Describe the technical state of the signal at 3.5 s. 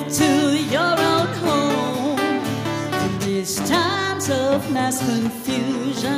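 At 3.5 s the signal is intact, with no dropout, distortion, clicks or other audible fault at that point.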